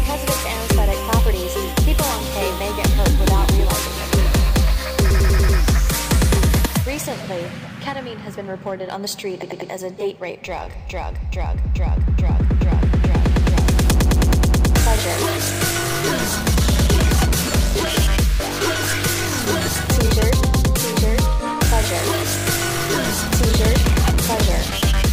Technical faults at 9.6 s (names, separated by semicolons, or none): repeated frames